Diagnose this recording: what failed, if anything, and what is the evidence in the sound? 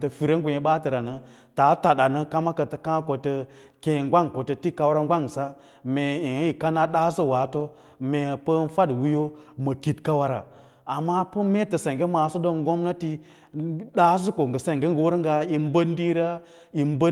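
Nothing failed; the speech carries no audible technical fault.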